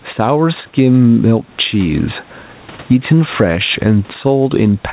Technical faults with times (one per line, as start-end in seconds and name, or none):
0.00-4.92 gain pumping